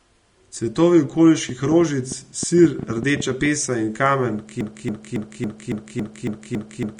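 The speech carries Vorbis compression damage from start to finish. Nothing is heard above 10.6 kHz. The treble is coarsely quantised, so fine detail turns to grainy hiss. Consonant attacks blur and the tone sounds rough. This points to a low bitrate, likely around 35 kbps.

From 1.49 to 3.47 s, a train of clicks sits over the speech. There are roughly fifteen sharp ticks, about seven per second, at an uneven pace. They peak about 10 dB above the speech. The likely cause is interference or a faulty connection.

At 4.61 s a broken-record loop begins and runs to the end. A 0.28 s fragment repeats nine times, back to back. The playback or stream likely stalled and kept resending its last buffer. The audio that should have followed is lost.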